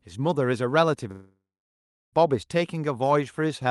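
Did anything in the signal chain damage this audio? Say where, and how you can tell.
Yes, at the network stage, most likely a long network dropout on the call path. From 1.11 to 2.15 s, about a second of speech never arrives. The receiver's concealment extends the last sound into a tail that fades, leaving roughly 0.7 s of silence before speech resumes at 2.15 s, with the lost section simply gone. The audio around the gap carries the call codec's band limit near 12 kHz.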